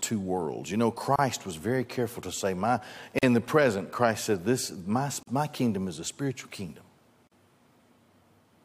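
Short dropouts in the speech at 1.16 s, 3.19 s (after "careful to say my"), 5.23 s (after "said this my") and 7.27 s (after "is a spiritual kingdom") are gaps at a join of encoded pieces, spaced 2 s apart. Each separately encoded piece kept its encoder start delay and padded last frame, leaving about 28 ms, then 43 ms, of silence. On a waveform and spectrogram, each shows as a narrow blank vertical band with slightly smeared edges before the sound resumes.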